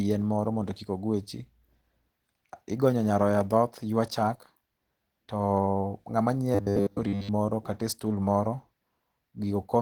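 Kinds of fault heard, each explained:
Opus voice compression: Across the whole clip the speech sounds plainly coded: hoarse and grainy, with a faint robotic edge. The encoder is running at 16 kbps in hybrid mode, where a linear-prediction coder handles the lower band and a transform layer covers the rest. It keeps fullband width, reaching about 20 kHz, so the damage comes from thinly coded excitation in 20 ms frames rather than from a narrowed band.
Robotic sound from repeated short buffers: From 6.55 to 7.29 s the speech turns into a rigid, metallic buzz at a steady 100 Hz that still roughly follows the words. The likely cause is audio arriving too late, so the playback side fills the gap by repeating its last 10 ms of sound. That repetition stamps a fixed pitch onto the signal. Most of that stretch seems to be repeats rather than real audio.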